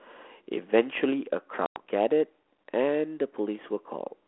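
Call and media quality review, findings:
Packet loss on ADPCM call, 1.66–1.8 s: 100 ms hard-edged silent gap, a handful of packets dropped. The G.726 decoder's adaptive predictor and step size lose sync with the sender.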